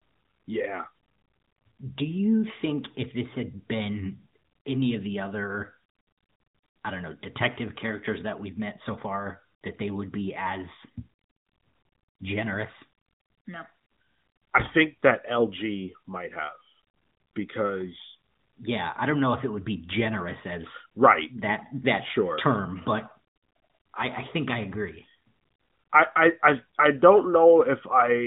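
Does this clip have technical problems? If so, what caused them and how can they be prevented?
No, there are no technical problems to report here.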